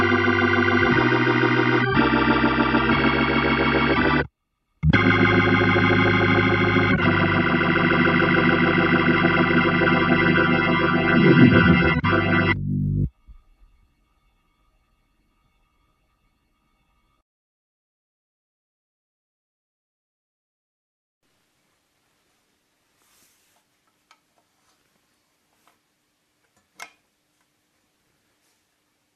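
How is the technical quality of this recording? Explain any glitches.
The recording is compromised by a steady fault running its whole length: the resampler restarted on every block. The sound was converted from 44.1 kHz to 48 kHz in 10 ms blocks, and each block was processed without its neighbours, leaving a small error at every edge. These repeat at 100 Hz, a buzz that rides on the signal and disappears in quiet passages. A spectrogram shows harmonics spaced 100 Hz apart, and the waveform shows tiny regular discontinuities.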